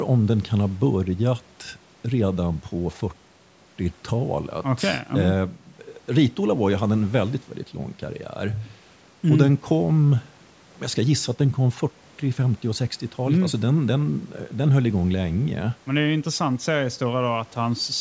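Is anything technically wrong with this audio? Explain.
No, nothing technically wrong can be heard in this speech. It has passed through a call's microphone processing, so the lowest bass is trimmed and nothing reaches above 8 kHz, which is expected for that path.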